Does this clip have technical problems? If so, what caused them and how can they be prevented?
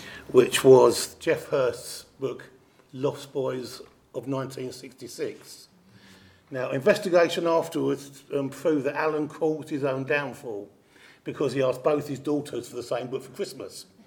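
No, this clip has no technical problems, so there is nothing to trace back to a cause or to prevent.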